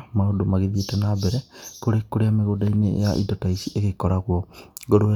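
No technical faults are audible anywhere in this speech recording.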